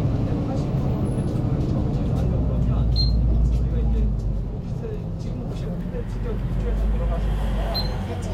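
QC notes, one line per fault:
No faults heard; nothing to log for this audio.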